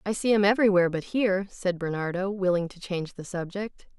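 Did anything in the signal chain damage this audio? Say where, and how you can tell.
No, nothing in the signal chain audibly damaged this speech recording. Listening through the whole clip, nothing points to a problem at any stage between capture and playback.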